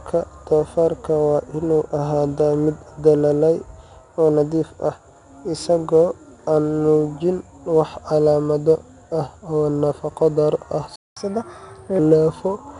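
4-bit ADPCM compression runs throughout: each sample is coded as a coarse step from a prediction, leaving plainly audible gritty hiss that tracks the speech, with nothing above 10.6 kHz. A playback stall at 10.96 s cuts the speech to silence for about 0.21 s, until 11.17 s, likely because the player ran out of buffered data. Catch-up at higher speed follows from 11.17 to 11.99 s: the backlog plays at 1.25 times normal speed, raising the pitch by roughly four semitones before settling back.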